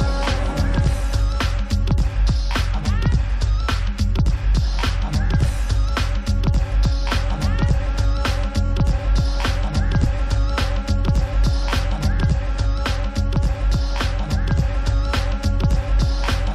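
A single compressed frame was delivered more than once, so at 8.65 s the decoder plays the same 23.2 ms block three times in a row through to about 8.70 s. This is a repeated-frames fault. The length of the repeated slice points to one frame rather than a longer run. The result is a brief stutter. The two extra plays add 46.4 ms to the audio.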